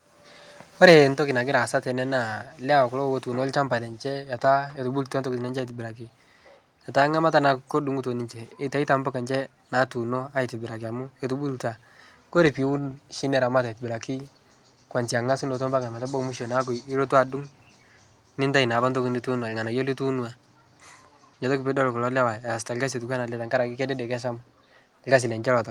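From 0.83 to 0.96 s, the microphone input was likely set too high, driving peaks about 4 dB past the converter's limit. This is microphone overload: a small share of the waveform has its tops sheared flat, giving the loudest speech a harsh, crackling edge.

At 1.14 s, just before "nagira aasa tene naa", the call software likely reacted to that distortion by cutting the device's input volume in a single step of about 5 dB. With the microphone volume stepped down, speech and background noise both drop abruptly to a quieter level.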